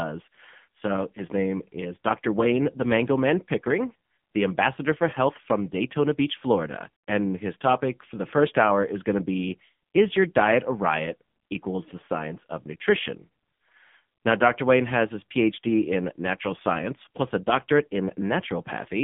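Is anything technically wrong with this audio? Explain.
Yes. AMR narrowband mobile codec damage runs throughout: the speech is squeezed into a 150 Hz to 3.5 kHz line band with nothing above 3.6 kHz, and its buzzy, synthetic pulse-excited texture fits a low 6.7 kbps mode.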